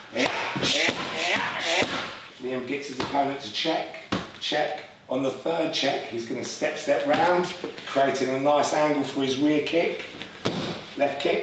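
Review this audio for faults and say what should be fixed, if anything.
Gain pumping throughout: the gain ducks around 10 dB under each loud sound, likely from excessive input gain driving a fast limiter. Lower the microphone gain so the limiter rarely engages.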